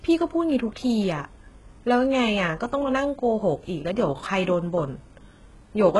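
Throughout the speech the treble is bright but synthetic: s sounds come out gritty and lispy, with a metallic edge, and nothing is present above about 11.5 kHz. This points to heavy HE-AAC compression at a very low bitrate, likely around 12 kbps, where spectral band replication copies lower bands upward and misaligns the harmonics.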